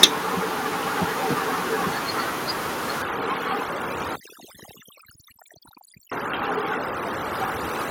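Right at the start, around 0.04 s, the level drops by about 3 dB in one clean step, and the voice and background fall together. That's most likely the microphone volume stepped down: the call software judging the input too hot and pulling the device gain back.

From 3.02 s to the end you get overdone noise removal. The room noise, which had been sitting about 10 dB under the speech, drops and breaks up into twinkly specks. The suppressor is also cutting the quieter bands of the voice.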